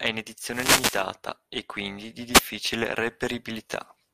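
Overlap-add ripple runs through the whole speech clip. The signal was split into windowed frames and rebuilt with an overlap whose window gains do not add up to a flat total. The level therefore swings by about 6 dB once per frame, at a rate of around 300 Hz. That rate is too fast to hear as a separate pulse, so the voice picks up a metallic buzz with extra tones around it from start to finish.

A wireless microphone noise hit occurs from 0.47 to 1.07 s, and a shorter one from 2.31 to 2.42 s. In each, the analogue FM radio link fades as reflected signal paths cancel the direct one. The receiver's noise floor then rises over the audio. The longer event is a sustained swish of static lasting over half a second. The second is a brief burst of roughly 0.1 s.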